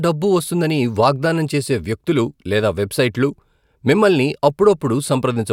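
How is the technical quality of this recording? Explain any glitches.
Nothing to flag: no technical faults are audible anywhere in the speech.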